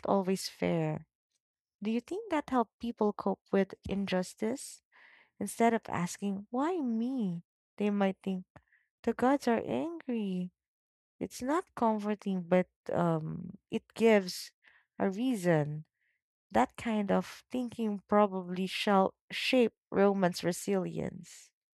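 Nothing in this recording points to a technical fault, so there's no problem to trace at any point along the way.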